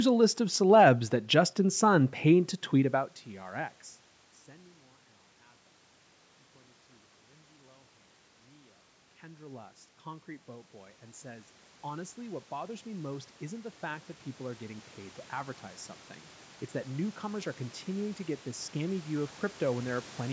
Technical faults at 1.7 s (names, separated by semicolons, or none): none